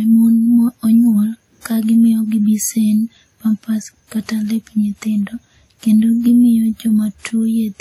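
Across the whole clip the speech carries plainly audible coding damage, most likely from WMA compression. The transform codec spreads quantisation noise over tens of milliseconds around each sound. The speech rings and turns washy. A hiss rises and falls with the speech. Nothing is present above 16 kHz, so the top end is cut flat. The density of the artefacts fits a stream of about 48 kbps.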